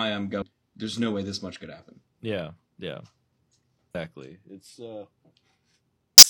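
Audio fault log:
0.38–0.44 s, 3.90–3.95 s, 6.18–6.24 s: damaged data in a compressed stream. Corrupt bytes make the decoder misread frames and lose sync, producing brief 50–60 ms glitches heard as a chirp, squawk, click or short hole.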